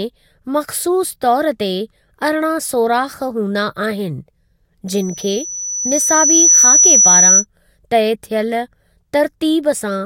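At 4.88 s a loudspeaker feedback squeal starts. A microphone is picking up its own loudspeaker, and the loop gain passes one at 5.9 kHz. A thin tone swells over about a second and a half to roughly 10 dB above the speech. It stops at 7.45 s.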